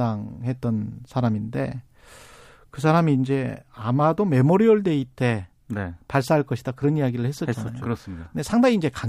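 Nothing in this speech recording stands out as a technical fault; no dropouts, glitches or other disturbances turn up anywhere along the way.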